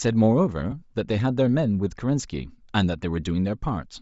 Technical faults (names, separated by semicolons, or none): Bluetooth LC3 compression; lost LE Audio frames